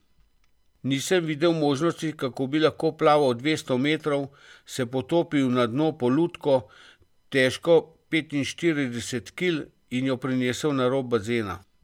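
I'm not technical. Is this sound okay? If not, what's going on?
Yes, this recording is okay. Nothing in it sounds broken or out of place.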